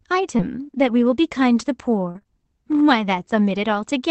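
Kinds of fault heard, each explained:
Short concealed packet loss: Stretches of the stream arrived too late for the decoder, so the receiver extended the preceding sound to cover each hole and then crossfaded back into real audio. It happens at 0.37 to 0.41 s and again in a cluster from 2.11 to 2.27 s, with gaps of 20 to 40 ms. Each covered stretch comes out as a brief smear or wobble in the speech.
Lost packet rebuilt from error correction: Two single 20 ms packets were lost, but the packet following each carried a low-bitrate duplicate, so the Opus decoder played that copy instead of leaving a gap. This happens at 0.39 to 0.41 s and at 2.15 to 2.17 s. Both spots overlap the concealed stretches. The rebuilt frames sound coarser and noisier than the speech around them, as a short rough patch rather than a dropout.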